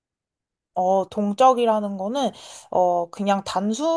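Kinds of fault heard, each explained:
No faults detected in this speech recording.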